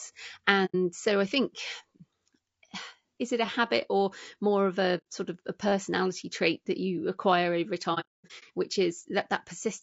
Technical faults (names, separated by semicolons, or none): low-delay AAC compression; AAC frame loss with muting; repeated buffer